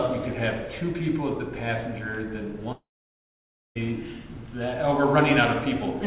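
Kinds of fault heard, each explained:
Long network dropout: At 2.72 s the sound gives way to a brief buzzy smear of the last audio that fades within about a tenth of a second, then there's roughly 0.92 s of silence until the sound resumes at 3.77 s, just over a second later, with that stretch simply gone. That's the likely result of packets not arriving, with the receiver's concealment filling in briefly before giving up. The band-limited, nothing-above-4 kHz sound around it fits a G.711-style call path.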